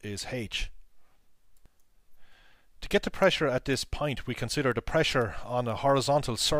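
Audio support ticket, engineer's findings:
Clock slip clicks, 0.12 to 6.59 s: faint, evenly spaced ticks about ten per second, roughly 70 in total, each a single-sample drop or repeat. Likely two unsynchronised device clocks, off by around 300 ppm. Spectrogram: thin regular vertical lines. Waveform: tiny one-sample steps.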